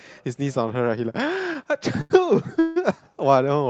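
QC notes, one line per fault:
2.01–2.22 s, short stall from a late packet: a sound is held on for about 88 ms, with a faint buzzy sustain, and then the audio carries on from exactly where it paused, with nothing lost. A packet missed its playout time, the jitter buffer emptied, and the receiver stretched the last sound to cover the wait. Playback then resumed sitting about 88 ms later than before.
2.59–2.78 s, call audio freeze: for about 165 ms the sound hangs as a continued, fading buzz rather than dropping to silence, then picks up again from the point where it stopped, so nothing is missing and a gap has simply been inserted. This is likely a run of packets delayed in transit that drained the jitter buffer, with the receiver extending the last sound until they arrived. The playout delay grows by about 165 ms.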